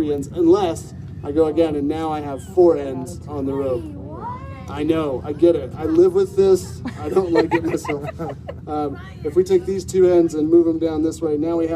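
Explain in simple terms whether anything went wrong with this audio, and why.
Nothing went wrong here.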